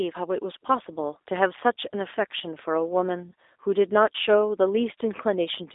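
A speech clip passed through a G.729 codec for its whole length, the low-rate VoIP coder that rebuilds each 10 ms frame from a vocal tract filter, a pitch predictor and a few pulses, consistent with about 8 kbit/s. The sound is confined to a 300 Hz to 3.7 kHz telephone band with nothing above 3.8 kHz, and the coding damage is plainly audible as a rough, synthetic edge.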